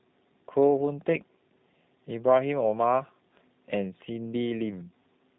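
Throughout, G.729 coding leaves the speech rough and synthetic, consistent with 8 kbit/s G.729A. The spectrogram shows nothing above 4 kHz.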